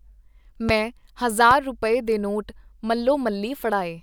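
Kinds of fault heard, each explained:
Loud pop: at 0.69 to 0.72 s and again at 1.51 to 1.54 s, a single sharp pop cuts in over the speech, the first peaking around 15 dB above it and the second around 10 dB. Each is a brief electrical pulse added to the signal, likely from a switch, a plug, static or a driver glitch. The following circuitry shapes it into a short thump while the speech carries on underneath.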